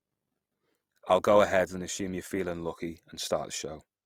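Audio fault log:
Throughout, Opus compression: the speech sounds rough and grainy, with noise filling starved bands instead of leaving holes. This likely comes from fullband music-mode Opus near 24 kbps.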